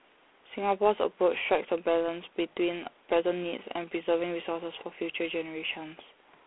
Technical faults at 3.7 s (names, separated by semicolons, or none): G.726 ADPCM